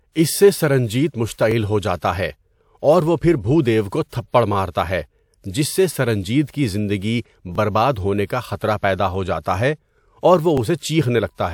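At 1.51 s, between "اس سے سرنجیت" and "ہو جاتا ہے", there's a tiny stutter, and it comes back at 4.54 s after "کو تھپڑ", at 7.55 s after "سے سرنجیت کی زندگی", and at 10.58 s. That's overlapping chunks: the speech was handled in 3-second blocks, each starting about 20 ms before the previous one ended, so that sliver plays twice at every join. You hear it as a quick click-stutter every three seconds.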